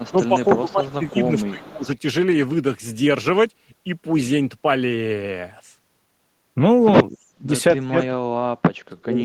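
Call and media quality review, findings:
Echo leak, 0.00–0.27 s, 0.49–0.59 s, 0.88–0.94 s, 1.16–1.48 s. Likely far-end loudspeaker echo escaping the canceller. Delayed copy of the speech trails it by 293 ms, in short scraps about 25 to 30 dB below the talker.

Speech suppressed in double talk, 0.10–1.88 s, 7.10–7.51 s, 7.79 s to end. Likely the canceller misreading both talkers as echo and attenuating. Speech dips, deepest cuts around 20, 35 and 40 dB respectively.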